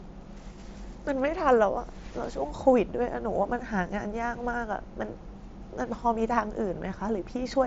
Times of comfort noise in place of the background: none

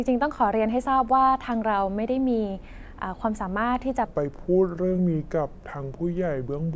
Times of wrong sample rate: 4.06-6.75

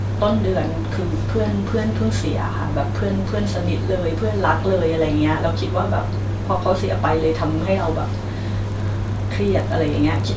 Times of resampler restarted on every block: 8.64-10.37

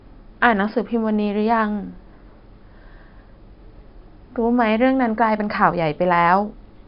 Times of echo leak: none

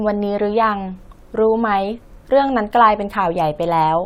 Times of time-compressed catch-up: none

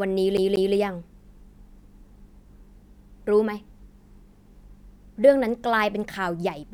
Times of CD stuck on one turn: 0.37-0.74

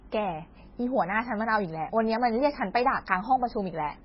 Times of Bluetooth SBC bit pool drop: none

